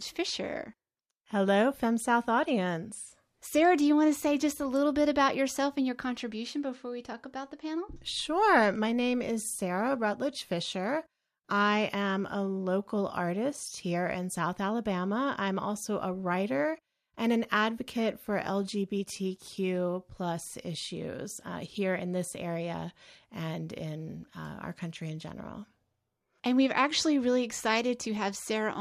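Nothing goes wrong technically anywhere in this bit of speech, so there's no fault to point to at any moment.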